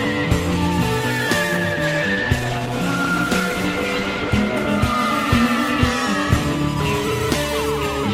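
From 1.52 s to 5.50 s the music shows a call bitrate drop. The encoder falls from 32 kbps to 14 kbps, bottoming out for about 2.9 s. Coding turns coarse, watery and dull, then clears. Unlike packet loss, nothing drops out or stutters.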